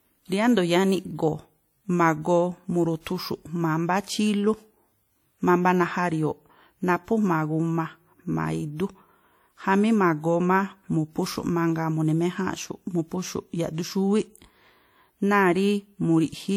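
From start to finish, the speech carries plainly audible codec damage. It rings and sounds washy. A hiss swells and fades with the voice. WMA compression is the likely cause, and the damage fits the first WMA version at around 48 kbps. Its long transform blocks smear quantisation noise across tens of milliseconds around each sound. Weak spectral detail is zeroed out. The band still extends to 20.1 kHz.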